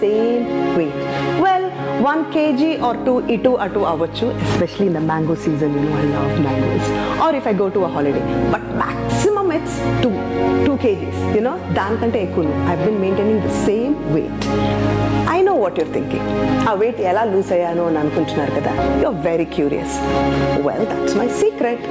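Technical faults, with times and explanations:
Throughout, gain pumping: the level swings about 15 dB, so loud and soft parts end up closer in level and everything sounds squashed. That's likely input gain set way too high, with a fast limiter clamping it down, on top of the call's normal bass roll-off.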